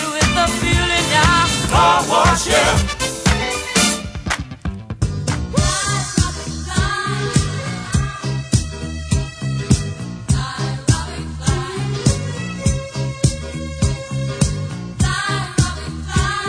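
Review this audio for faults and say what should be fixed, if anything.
No faults turn up in this audio, so nothing needs to be fixed.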